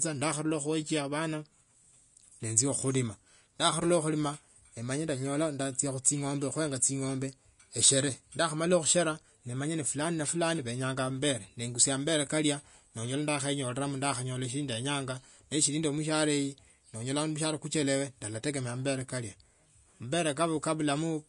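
Throughout the speech, nothing is present above 10.5 kHz, and the upper band sounds hissy and grainy, with roughened tones and smeared consonant onsets. The likely cause is Vorbis compression at a low setting, consistent with around 36 kbps, where coarse treble quantisation turns fine detail into noise.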